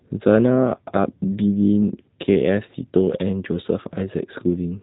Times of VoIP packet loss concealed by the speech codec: none

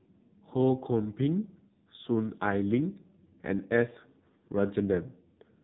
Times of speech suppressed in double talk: none

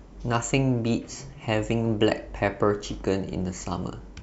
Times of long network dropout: none

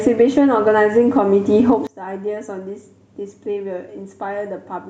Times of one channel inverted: 1.87-4.89

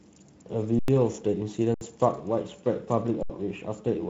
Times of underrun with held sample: 0.79-0.88, 1.74-1.81, 3.23-3.30

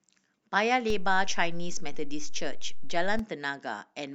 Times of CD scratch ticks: none

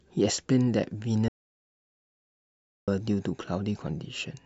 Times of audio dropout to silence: 1.28-2.88

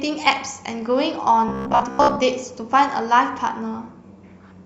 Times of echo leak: none

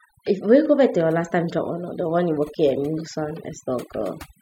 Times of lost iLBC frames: none

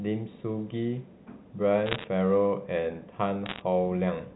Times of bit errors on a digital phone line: 1.86-2.04, 3.46-3.61

